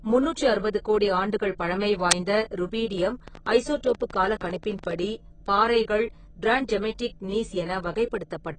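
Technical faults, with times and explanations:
Throughout: heavy AAC compression damage, likely from AAC-LC at a low bitrate. Nothing survives above 9.3 kHz, so the speech sounds dull, with a watery, smeared texture on sibilants. A spectrogram shows a hard ceiling at 9.3 kHz and patchy, holed upper bands.
2.11 s: an uninitialised buffer, just after "அறுபது கோடி ஆண்டுகள் பழமை". A harsh, loud burst of digital noise lasts about 12 ms, which fits a 512-sample buffer played before audio was written to it. The waveform shows a dense block, and the spectrogram shows a broadband vertical stripe.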